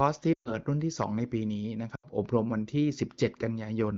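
Lost AMR speech frames occur first at 0.33 to 0.54 s and again at 1.95 to 2.06 s. Corrupted frames failed their checks, so the wideband decoder bridged each gap by repeating its last good pitch and vocal tract settings while lowering the gain. The sound drops to near silence within two frames, in gaps of roughly 120 ms, then 80 ms, which fits runs of about six and four 20 ms frames. Each time the speech returns briefly weak or rough.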